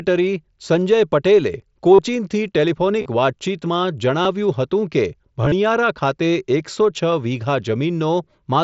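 Speech over a Bluetooth headset link, with concealed Bluetooth headset packet loss at 1.95–1.99 s (about 38 ms lost), 3.00–3.08 s (45 ms scattered over 75 ms), 4.23–4.25 s just before "હતું કે", and 5.43–5.52 s just after "હતું કે" (53 ms over 90 ms). Missing packets were filled by repeating the best-matching recent stretch of waveform, giving brief buzzy held tones. On a waveform these show as short periodic repeats at steady level; on a spectrogram, as flat horizontal harmonic bands with a smeared join. The mSBC wideband codec itself passes audio to 8 kHz.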